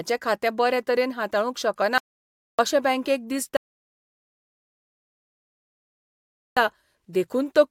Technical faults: audio dropout to silence; rebuffering stall

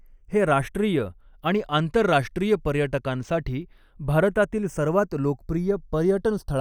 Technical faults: channels drifting apart

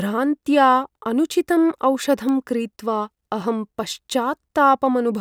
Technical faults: bit error spike

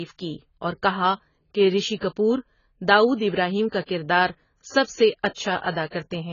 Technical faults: AAC compression; pre-echo

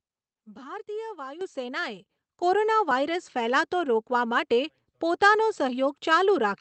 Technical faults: microphone volume stepped up

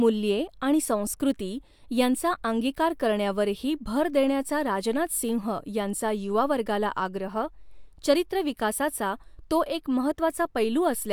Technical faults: none

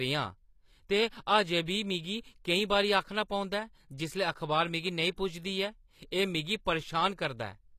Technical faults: HE-AAC compression

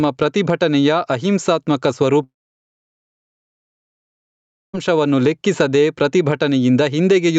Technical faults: gain pumping; long network dropout

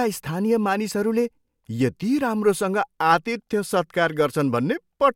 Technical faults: none

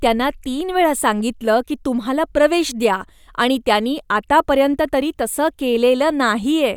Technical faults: none

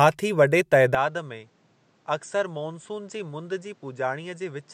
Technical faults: input switched to a poorer device

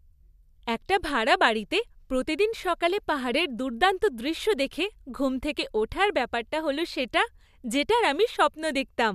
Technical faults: none

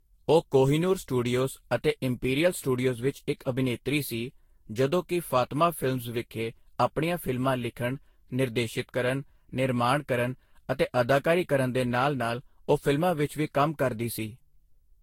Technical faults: generation loss

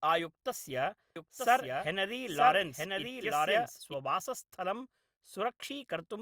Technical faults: doubled audio track

